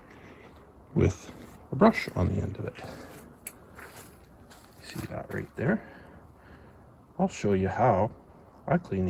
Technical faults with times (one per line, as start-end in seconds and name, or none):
none